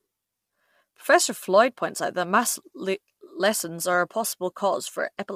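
Speech clip with plainly audible low-delay AAC compression running the whole way through. The voice sounds rough and grainy, with noise filling in between the harmonics and a top end that comes across thin and a bit synthetic. That's likely AAC-ELD, the low-delay codec behind video calls: its very short frames can't resolve pitch harmonics cleanly and they eat bits, and the damage here fits a bitrate of around 32 kbps.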